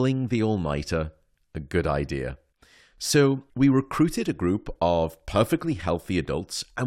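No technical faults can be heard at any point in the speech.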